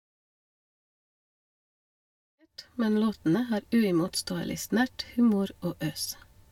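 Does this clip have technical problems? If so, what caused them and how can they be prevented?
No, nothing in this speech clip points to a technical problem.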